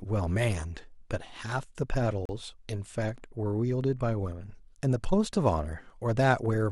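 A speech recording with one gap between stream segments: from 2.25 to 2.29 s the sound drops out for about 36 ms, and both edges of the hole are abrupt rather than faded. The cause is a mismatch in segment timing. Two consecutive segments' time stamps leave a short stretch uncovered, and the player fills it with digital silence. The gap adds time but removes no audio: nothing is missing on either side, and the material simply resumes later.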